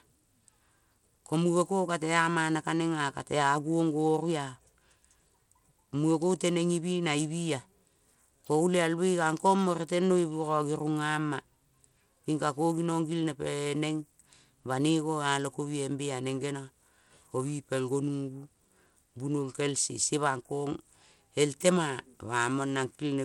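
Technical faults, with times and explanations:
Throughout, likely Bluetooth SBC compression: the speech has a gritty, grainy edge, and the upper treble thins and flickers in and out. The codec starves its weak top sub-bands of bits and coarsely quantises the rest, as a low data rate near 96 kbps would.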